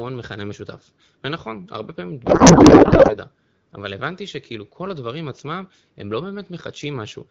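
From 2.25 to 3.17 s the speech turns into garbled noise and warble. This is a codec payload misread. Octet-aligned AMR frames are being read as bandwidth-efficient, so every field lands in the wrong place. Before and after, the clear wideband AMR sound fits about 12.65 kbit/s.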